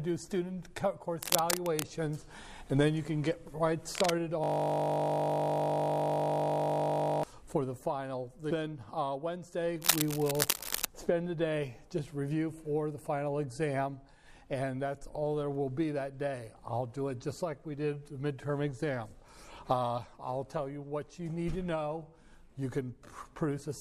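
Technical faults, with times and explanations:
1.22–1.83 s, 3.95–4.10 s, 9.82–10.85 s: cable scratch noise. Bursts of dense, irregular crackle sit at roughly the same level as the sound, likely from a worn cable or connector being moved. A spectrogram shows ragged broadband smears, and the waveform shows jagged spikes riding over the signal.
4.44–7.23 s: system hang loop. A single 20 ms slice of audio repeats exactly, about 140 times, while the playback buffer cycles with nothing new arriving. The result is a steady 50 Hz buzz. A spectrogram shows evenly spaced harmonic lines, and the waveform shows an identical repeating cycle.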